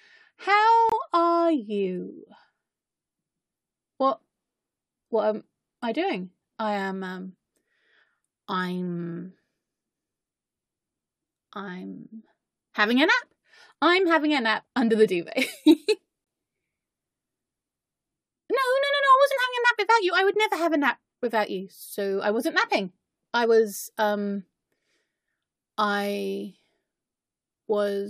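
Corrupt frame muted at 0.89 s and 16.24 s: damaged compressed frames were rejected by the decoder and replaced with silence, leaving abrupt holes of 36 ms, which fits a single frame, and 69 ms, which points to about three consecutive frames, with timing preserved.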